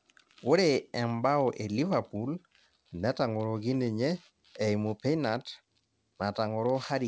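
Speech recording with a short stall from a late packet at about 1.16 to 1.22 s. A packet missed its playout time, the jitter buffer ran dry, and the receiver stretched the sound already playing, filling about 26 ms, then resumed from the same point once the packet arrived. No audio is lost, which sets it apart from a dropped packet. Instead of a skip, a sound is held slightly too long, with a faint buzz or dip, and everything after runs about 26 ms later. The G.722 call path leaves nothing above 8 kHz.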